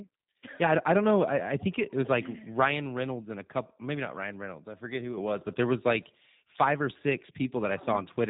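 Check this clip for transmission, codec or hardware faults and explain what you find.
One fault runs through the whole recording: G.729 codec damage, audible from start to finish. The coder models speech as a vocal tract filter driven by a pitch predictor plus a handful of pulses per short frame, which fits a low-rate telephony path around 8 kbit/s. Everything above about 3.8 kHz is gone, so the speech sounds muffled and band-limited, and the pulse-based rebuilding leaves it plainly rough and somewhat synthetic.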